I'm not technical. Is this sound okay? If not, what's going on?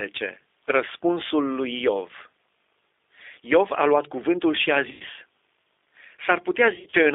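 No. The whole recording went through the G.729 codec, a phone-call squeeze that leaves the speech thin, slightly rough and robotic, unlike a muffled microphone. There's also VoIP packet loss concealed by the speech codec: at 4.91 to 5.03 s, after "luat cuvântul și a", and at 6.75 to 6.96 s, gaps are patched with a stretched, fading smear instead of silence.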